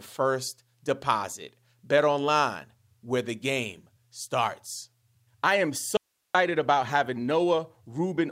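An audio dropout to a faint residue hits this speech recording from 5.97 to 6.35 s. The voice cuts out abruptly for about 375 ms, leaving only hiss roughly 50 dB below the signal. The likely cause is a brief loss of the source while the downstream path stayed live.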